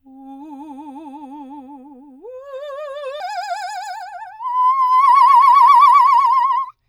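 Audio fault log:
3.20–6.88 s, section at the wrong speed: From 3.20 s to the end, the music plays 1.39 times faster than recorded. Pitch jumps up by about five semitones along with the tempo. The likely cause is playback or editing against the wrong clock.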